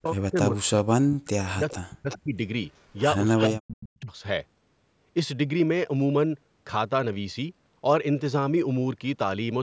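From 0.00 to 0.36 s, 0.52 to 1.37 s, 1.53 to 2.38 s and 3.48 to 4.12 s the speech dips and breaks into pieces, falling by roughly 40 dB at its deepest. This is speech suppressed in double talk: the likely cause is an echo canceller that, with both sides talking, could not separate this talker from the loudspeaker return and turned everything down. On a waveform these stretches show chopped, collapsing envelopes. On a spectrogram the energy fades into gaps.

Overlapping the third suppressed stretch and continuing after it, a faint delayed copy of the sound comes back in short scraps. It appears at 1.70 to 1.74 s (a 414 ms delay, about 20 dB below the speech), at 2.09 to 2.19 s (374 ms, about 15 dB down), at 2.75 to 2.84 s (374 ms, about 40 dB down) and at 3.37 to 3.46 s (374 ms, about 15 dB down). This is echo leak, likely from a loudspeaker-side canceller letting residual echo through. On a spectrogram it shows as weak repeats of earlier speech patterns, offset by about 0.37 to 0.41 s. 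The repeats stay below the 8 kHz ceiling of the call's microphone path.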